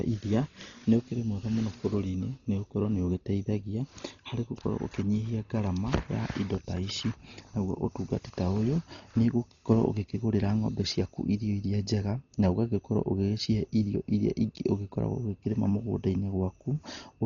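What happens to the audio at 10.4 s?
At 10.4 s the speech sounds dull and muffled, with nothing above 7 kHz, and a rough, fluttering noise clings to the voiced sounds. The same damage runs through the whole clip. The likely cause is heavy Dolby Digital compression. At a starved rate, fitting roughly 32 kbps, the encoder cuts the band and leaves many frequency lines without real detail. The decoder fills those lines with noise, which causes the roughness.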